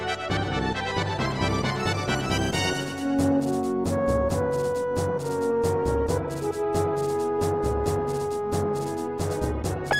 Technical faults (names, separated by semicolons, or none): none